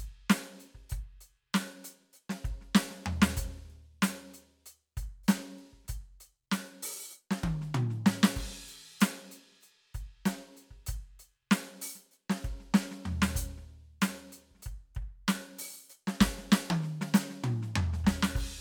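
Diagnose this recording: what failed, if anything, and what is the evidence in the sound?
Nothing in this music recording points to a failure at any stage of the chain. No moment in the sound stands out as evidence that something went wrong.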